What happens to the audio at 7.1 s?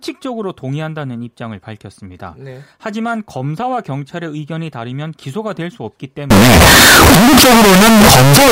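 At 7.1 s the speech is buried in very loud, harsh distortion, with quiet moments blaring as loudly as the rest, from 6.30 s to the end at 8.52 s. The likely cause is signed and unsigned mixed up: 16-bit samples read with the wrong sign convention, so the top bit flips and every zero crossing leaps across the full range.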